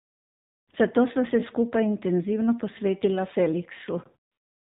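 AMR narrowband mobile codec damage runs from start to end. The speech has been squeezed through an 8 kHz mobile codec, so nothing above 4 kHz survives, and the voice is rebuilt from a vocal-tract model driven by sparse pulses. The coding damage is plainly audible: a buzzy, synthetic edge on voiced sounds and a dull, band-limited top end, which fits a low rate around 7.4 kbps.

AMR comfort noise fills 0.0 to 0.68 s and 4.32 to 4.73 s. Over these 675 ms and 415 ms stretches the phone treated the talker as silent and stopped sending speech frames. The receiver generated synthetic noise from a rough level and spectrum estimate. What you hear is a smooth, steady hiss that switches in at the boundaries in place of the real background.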